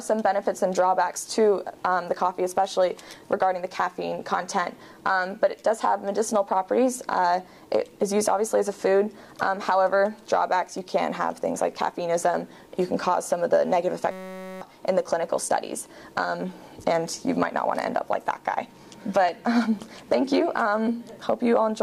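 System hang loop from 14.11 to 14.61 s: a frozen driver left the hardware replaying one 5.33 ms piece, consistent with a 256-sample buffer, as a steady 188 Hz buzz.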